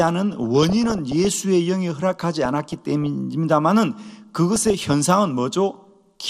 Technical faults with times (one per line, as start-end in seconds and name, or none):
0.00-6.30 MP2 compression
0.32-1.32 DAB burbling
2.20-3.06 DAB burbling
4.56-4.93 DAB burbling